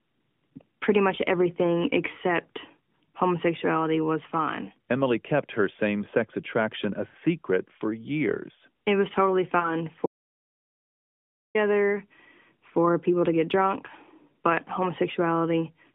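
At 7.08 to 7.16 s there are lost AMR speech frames. Radio errors corrupted the data, and the decoder filled about 60 ms, which fits three 20 ms frames, by repeating the last good pitch and vocal tract settings at falling gain. It sounds like a short smeared, fading warble. On a spectrogram the harmonics flatten into steady horizontal bands that weaken. A second single-frame loss near 9.60 to 9.77 s gives a brief dip in level and then some roughness as the sound recovers.

From 10.06 to 11.55 s there is an audio dropout to silence of about 1.5 s. The input was lost, likely through a failed link or disconnection, and silence was written in its place. The sound cuts off abruptly and returns mid-flow, with no room tone in the gap. The waveform shows a flat line, and the spectrogram shows a blank black block across every frequency. The narrowband mobile coding behind all of this limits the band to about 150 Hz to 3.5 kHz.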